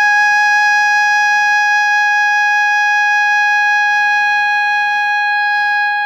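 Throughout the music, computer activity noise adds a faint buzzing chirp pulsing around 150 times a second, well below the music, showing as evenly spaced vertical striations on a spectrogram.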